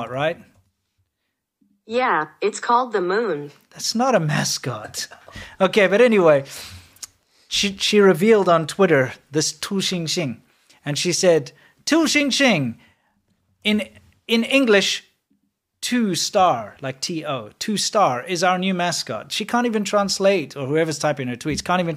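No technical faults can be heard anywhere in the speech recording; the signal stays continuous and intact for its whole length.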